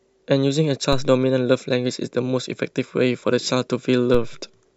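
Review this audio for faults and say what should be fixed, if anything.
Two DC steps occur, at 0.93 s and at 4.14 s. At each one the waveform's zero line jumps suddenly by about -16 dBFS. That abrupt shift is heard as a low thump under the speech, and the speech itself carries on unchanged. The offset does not hold. It drains away slowly, as a 2 Hz high-pass would let it. To prevent it, block DC at the input and avoid switching sources or recalibrating converters mid-recording.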